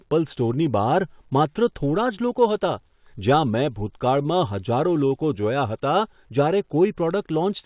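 From 4.22 to 4.36 s, one speech sound is held too long, with a slight buzz or dip as it is drawn out, and then the speech resumes where it left off. This is a short stall from a late packet: the jitter buffer ran empty, so the receiver stretched the last sound by about 28 ms until the packet arrived. Nothing is lost. The whole call path band-limits the audio, with nothing above 4 kHz, which fits a narrowband call codec.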